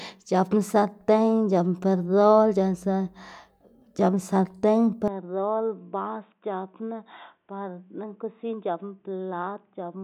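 Speech, and from 5.08 s to the end it turns dull and boxy with nothing above 3.8 kHz, drops roughly 10 dB in level, and gains a faint new noise floor. There is no gap at the change, most likely an input switched to a poorer device.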